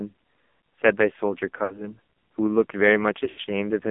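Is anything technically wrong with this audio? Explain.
Yes. The whole recording passes through the AMR narrowband mobile codec at a very low rate, likely around 5.9 kbps. Speech is confined to 200 Hz to 3.5 kHz, and it sounds buzzy and synthetic.

Lost AMR speech frames occur twice, from 1.64 to 1.95 s and from 3.24 to 3.44 s. The decoder repeats its last good settings at falling gain. Speech smears and fades for about 60 ms, then about 80 ms, before returning rough.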